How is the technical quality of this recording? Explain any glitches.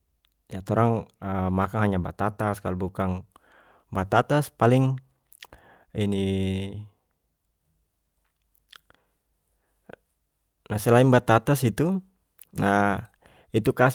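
Nothing here trips up the ear; there are no glitches to point to in this recording.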